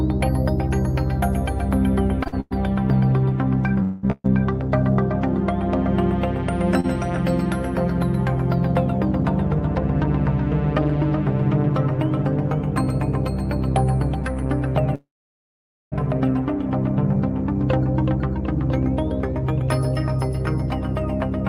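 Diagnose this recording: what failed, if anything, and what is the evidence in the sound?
The network stage shows repeated stalls (stutter) between 2.23 and 4.26 s. The jitter buffer ran dry five times, the longest wait 200 ms, with about half a second filled in all. On a spectrogram the last frame smears horizontally, and the waveform shows held, fading stretches.

A short stall from a late packet sits at 6.80–6.86 s. One packet arrived 34 ms late, so the receiver held the preceding sound until it came. A spectrogram shows a brief flat-banded smear, and the waveform shows the held sound before the audio resumes unbroken.

A call audio freeze runs from 14.95 to 15.94 s. The last sound continues briefly, then about 0.86 s of silence follows before the audio picks up where it stopped, likely a jitter buffer emptied by packets held up for nearly a second. The waveform shows a flat gap, and the spectrogram a blank column.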